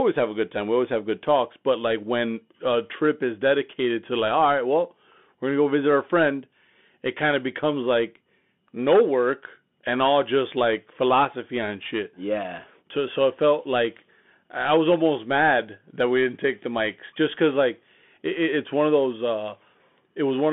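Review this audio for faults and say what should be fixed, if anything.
Narrow, boxy speech with scratchy s sounds and a granular hiss throughout suggests a Bluetooth CVSD headset codec: one-bit delta coding, band-limited to about 200 Hz–3.5 kHz. To prevent this, record through a wired microphone or a headset link using wideband speech.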